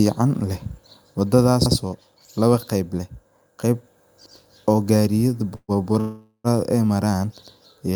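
Overlapping chunks at 1.66 s, between "leh wadadhas" and "oo lawa qeyb leh", and again at 4.26 s, between "lawa qeyb leh qeyb" and "oo gariyadha". The speech was handled in blocks of about 2.5 s, each starting 100 ms before the previous one finished, so that 100 ms plays twice at each join. It comes through as a brief stutter, recurring on the chunk spacing.

Call audio freeze at 5.55 s to 5.71 s, just after "oo gariyadha" and before "ay maran", and again at 6.00 s to 6.47 s. The most likely cause is packets being held up in transit until the jitter buffer emptied. The receiver stretched the last sound into a fading buzz for 129 ms and then 440 ms, each ending in a short silence, about 50 ms and 80 ms. Speech then resumes where it stopped, with nothing lost, but everything after each freeze plays later by the length of the gap.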